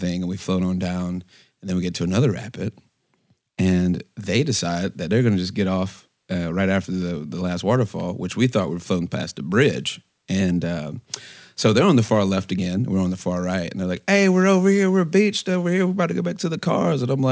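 Throughout the speech, the sample rate was reduced without an anti-aliasing filter first, which fits a drop from 44.1 kHz to 16 kHz. Energy above 8 kHz folds back as aliasing, roughly 25 dB down, making sibilants gritty and metallic, with content packed right up to 8 kHz.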